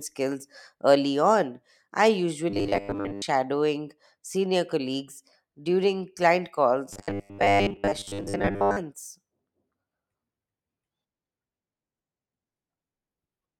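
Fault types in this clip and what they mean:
Robotic sound from repeated short buffers: speech becomes a rigid metallic buzz at 100 Hz from 2.50 to 3.22 s and 6.93 to 8.77 s, likely because starved audio was padded by looping about 10 ms chunks, so most of the actual sound is skipped.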